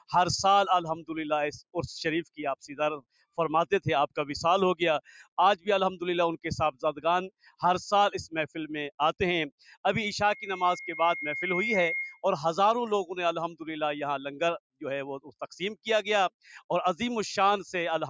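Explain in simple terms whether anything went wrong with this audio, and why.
A noise suppressor applied to music or sounds was left on. Built for speech, it treats steady sound as noise, so levels gently pump throughout.

Sound cut by the noise suppressor happens at 3.0, 5.04, 7.3 and 9.51 seconds. Each time, a held or fading sound suddenly sinks for a moment.

A loudspeaker feedback squeal starts at 10.28 seconds. A 2.1 kHz tone swells over about 1.5 seconds until it is as loud as everything else, then stops at 12.26 seconds.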